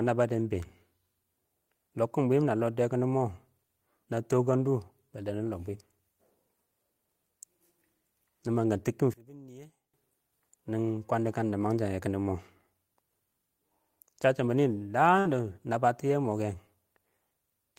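From 9.14 to 9.94 s the speech suddenly drops by about 24 dB and turns faint, before returning at full strength. The likely cause is one channel inverted: with one stereo side's polarity reversed, the centred speech cancels when the channels are summed to mono, leaving only their faint difference. On a waveform the envelope shrinks abruptly for those 0.8 s. A spectrogram shows the whole band fading.

At 15.19 s, right after "chəcchɪn bɪnɪ", a burst of packet loss interrupts the speech until 15.28 s. The receiver bridges the gap by continuing the last sound for about 56 ms and fading it down, so it comes across as a brief held, dying sound. Playback then resumes with about 60 ms of speech skipped. On a waveform the gap appears as a continued signal shrinking in amplitude, then an abrupt jump. A spectrogram shows smeared energy tapering off, followed by a hard edge.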